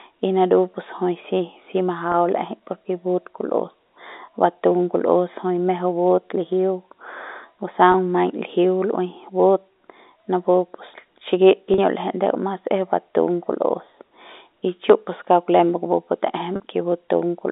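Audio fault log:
2.12, 7.92, 11.74 and 16.56 s: packet loss with pitch repetition. The gaps at 2.12 and 7.92 s last 20 ms each, which fits a single lost 20 ms packet. The gaps at 11.74 and 16.56 s last 40 ms each, which fits two lost packets. The receiver fills each gap by repeating the last pitch period. Because every gap is shorter than the fade-out, each one sounds like a brief held, buzzy tone rather than a dropout.
4.94, 9.92 and 14.9 s: audio missing between chunks. At each point about 20 ms of sound is absent, and the material on either side is butted together with no silence, so a small skip is heard. The even spacing of about 5 s points to a likely cause: a recorder or processor working in 5 s blocks and dropping a short piece at each block changeover. The speech on either side of these joins sits within the telephone band of 250 Hz to 3.7 kHz.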